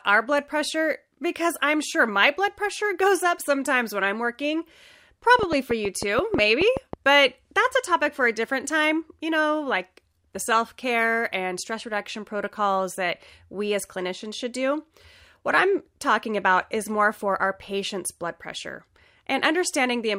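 A speech recording with a train of clicks from 5.39 to 6.94 s: about ten sharp, similar pulses at roughly 7 per second, spaced unevenly, peaking about 15 dB above the speech. The likely cause is interference from nearby equipment or a faulty connection or power supply injecting repeated impulses. The matched shape and sustained run over about 1.5 s set it apart from an isolated click from a single edit or glitch, and from random vinyl-style crackle.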